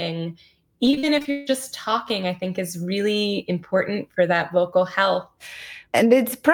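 Repeated packet loss (robotic sound) affects this speech from 0.85 to 1.49 s, just before "talking I think is". Successive lost packets leave several holes, the longest 161 ms. Each is patched by extending the preceding sound, so nearly half that stretch sounds choppy.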